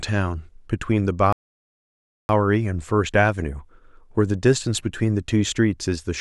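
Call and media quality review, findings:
Rebuffering stall, 1.33 to 2.29 s. Speech cuts to silence, resumes exactly where it stopped. Player buffer ran dry awaiting download. Nothing lost; about 0.97 s added.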